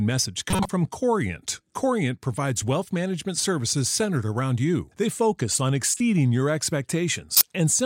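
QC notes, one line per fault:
0.50–0.69 s: corrupt frame decoded. Damaged bits in several frames played anyway, scattering energy to wrong frequencies. A fairly loud artifact.
5.94–6.00 s: corrupt frame decoded. Two bad frames, a quieter brief artifact.
7.32–7.41 s: corrupt frame decoded. A few frames, the loudest artifact.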